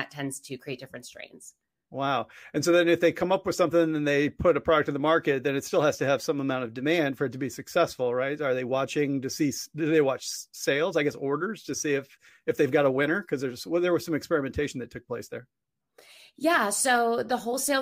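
No technical faults can be heard anywhere in this speech recording. No event stands out from the surrounding sound at any point, so there is nothing to place on a timeline.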